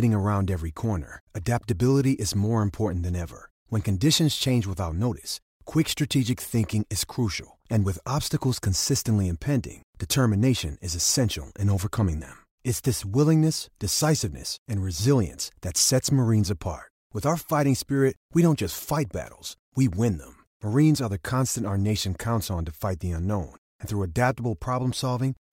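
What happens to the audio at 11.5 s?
Nothing goes wrong at 11.5 s; the speech runs through that moment intact, with no dropout, click or distortion.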